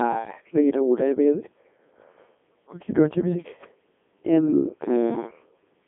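Throughout, the speech passes through a Codec 2 vocoder at 3.2 kbit/s, band-limited to 250 Hz–3.5 kHz, resynthesised from pitch and envelope, sounding heavily robotic and buzzy.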